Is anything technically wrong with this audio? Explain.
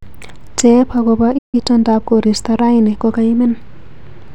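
Yes, there are two related faults.

At 1.38 s the speech cuts out abruptly for about 150 ms, resuming at 1.55 s. This is a playback stall. The player most likely ran short of buffered data or had its output thread held up, so nothing reached the output for that interval. It sounds like a brief, hard dropout in the middle of the flow, after which the speech picks up again.

From 1.55 s to 3.05 s the speech runs at about 1.1 times normal speed. This is a time-compressed catch-up. After the stall the player is behind, so it removes small segments and cross-fades across the joins to work off the backlog without shifting pitch. The speech sounds slightly rushed over that stretch.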